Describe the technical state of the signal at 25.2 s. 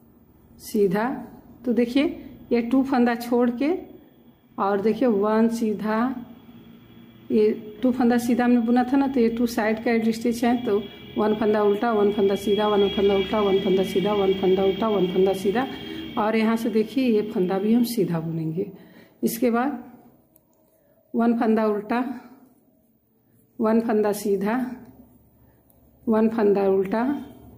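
At 25.2 s the signal shows gain pumping, which runs through the entire clip rather than starting or stopping near this moment. The likely cause is input gain set far too high, with a fast limiter or compressor clamping down whenever a loud sound arrives and releasing in the gaps. Around 25.2 s the level swings by roughly 5 dB, leaving the sound squashed and pulsing.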